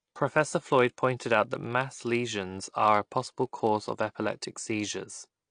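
A block size mismatch (padded) runs through the whole clip: each block is filled out with zeros, leaving a short gap every block and a steady 46.9 Hz buzz that fits a 1024-sample read size, while speed stays essentially normal. Compression damage is plainly audible throughout, with nothing above 9.8 kHz and a dull, smeared, warbling texture on the speech, most likely from low-bitrate AAC encoding.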